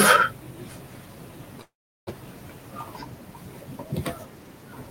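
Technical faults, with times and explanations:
1.61 to 2.09 s, call audio freeze: the speech stalls into a brief fading buzz, then about 370 ms of silence, and resumes exactly where it stopped, now roughly 0.46 s late. The likely cause is delayed packets draining the jitter buffer. Unlike a dropout, no speech is lost.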